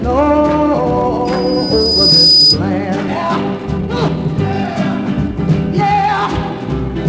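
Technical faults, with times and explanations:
1.25–2.59 s, loudspeaker feedback squeal: a single 5 kHz tone swells over about a second until it sits roughly 10 dB above the program. The microphone was picking up its own loudspeaker, and at that frequency the loop gain exceeded one, so the tone fed itself.
3.08–3.10 s, skip ahead: playback jumps forward with no gap or fill, and about a second and a half of audio is simply gone. Later audio was already queued, so the dropped stretch left the two sides of the jump joined almost directly.
3.28–6.96 s, jitter buffer speed-up: the audio runs at 112% speed with its pitch unchanged and sounds hurried. The receiver held more buffered audio than it wanted and trimmed it by repeatedly cutting short pitch-period pieces, removing around 0.4 s in total.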